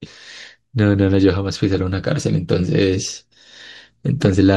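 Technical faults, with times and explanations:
4.25 to 4.33 s, DAB burbling: for about 80 ms the speech is overlaid with a few watery blips. Weak reception lets bit errors slip past the error correction into the MP2 audio data, and corrupted samples put short blips of noise in single sub-bands, while corrupted scale factors make sub-bands jump in level for up to a frame. The sound points to a low error rate, a small fraction of a percent, hitting around six frames.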